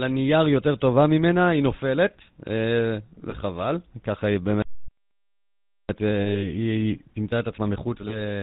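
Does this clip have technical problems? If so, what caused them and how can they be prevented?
Yes. The whole clip has a buzzy, gravelly roughness with no content above 4 kHz, the plainly audible sound of the GSM full-rate codec, which fits its 13 kbps mode. This codec rebuilds speech from a vocal-tract filter driven by a coarse, regularly spaced pulse train, so fine detail in the excitation is lost and the top of the spectrum is cut away. Carrying the call over a wideband codec such as AMR-WB or Opus would prevent this.

At 3.3 s, from 6.2 to 6.48 s, and at 8.08 s the speech briefly turns into a rough, metallic ring. These are lost GSM frames. Where a frame fails, the decoder repeats the parameters of the last good one to bridge the gap, with the level falling from the second lost frame on, so the brief holds of about 20 ms each at 3.3 s and 8.08 s smear one sound forward. The longer hold at 6.2 s lasts about 60 ms. 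Better channel error protection, or retransmission where latency allows, would prevent these.

From 4.62 to 5.89 s the sound simply stops mid-flow for about 1.27 s, then resumes. This is a playback stall, likely caused by the player running out of buffered data or its output thread being blocked until it recovered. A larger jitter buffer and an audio thread that is never blocked by other work would prevent it.

From 5.89 s to the end the speech is hurried at its normal pitch, running about 1.1 times real speed. This is time-compressed catch-up: after the stall, the player shortens its backlog by cutting out small slices and cross-fading the joins. Avoiding the stall in the first place would remove the need for this catch-up.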